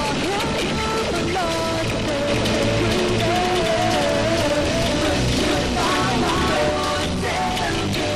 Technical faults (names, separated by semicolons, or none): doubled audio track